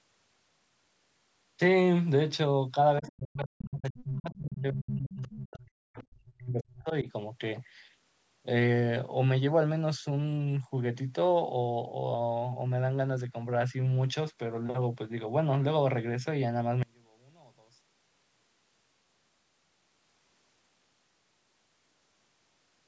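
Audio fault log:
3.0–7.08 s, speech suppressed in double talk: For roughly four seconds the talker's level is pushed down in uneven steps, at its deepest by about 40 dB, so parts of the speech thin out or nearly disappear. This is likely an echo canceller meeting both sides speaking at once. Unable to tell the local talker from the loudspeaker echo, it ducks the whole microphone signal rather than risk passing echo, and takes the talker down with it.
3.07–3.12 s, 3.6–3.64 s, 3.97–4.04 s, 5.14–5.35 s and 5.98–6.04 s, other side's voice leaking through: Five short scraps of a second voice break through, most lasting only 40 to 70 ms and the longest about 0.2 s. They sit roughly 15 to 25 dB below the talker, loudest at 3.6 s. The likely cause is that the echo canceller did not fully remove the far end's loudspeaker playback from the microphone, so residual echo slips out.
16.83–22.64 s, one channel inverted: In the final stretch the sound collapses by about 30 dB and turns into a faint ghost of itself when heard in mono. 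This is likely one stereo channel with reversed polarity. Summing the channels then cancels everything they share, including the centred voice and its low end, and leaves only the small difference between them.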